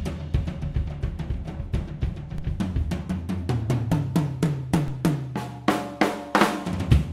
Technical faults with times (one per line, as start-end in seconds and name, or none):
2.38 DC step
4.88 DC step